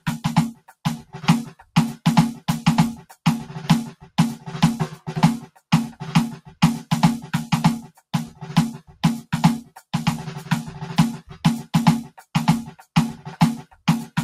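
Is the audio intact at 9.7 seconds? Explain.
No. From 9.64 to 9.82 s the sound is cut by the noise suppressor: a speech-tuned suppressor judged this part of the music to be noise and pulled it down by up to about 13 dB, so the sound sinks for roughly 150 ms. This happens inside a wider problem, a noise suppressor applied to music. Throughout the clip, steady tones and tails are repeatedly attenuated by around 5 dB while attacks pass, giving an audible pumping, thinning quality around that moment too.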